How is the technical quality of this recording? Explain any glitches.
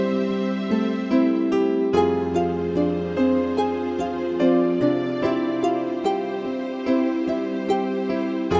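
Nothing to flag here, as there are no glitches in this recording and no audible technical trouble anywhere in it.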